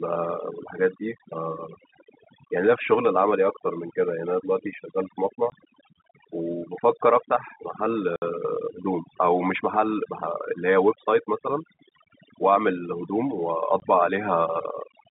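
Overdone noise removal runs through the whole speech recording: the suppressor pulls individual frequency bands down whenever they approach its noise estimate, leaving near-silent gaps with twinkling specks. Packet loss filled with silence cuts hard-edged holes at 5.50 to 5.52 s and 13.80 to 13.82 s, each 20 ms, and at 8.16 to 8.22 s, 60 ms, which fits three consecutive 20 ms packets dropped and replaced with silence. All of this sits on a telephone-band G.711 line limited to roughly 150 Hz to 3.7 kHz.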